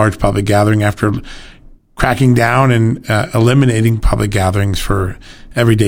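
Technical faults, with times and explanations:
3.87 to 3.89 s, electrical switching spike: a sharp burst of about 20 ms, peaking near -10 dBFS, just before "public gatherings", likely a nearby switch arcing into the line. Its 20 ms length over the speech sets it apart from a single-sample digital click.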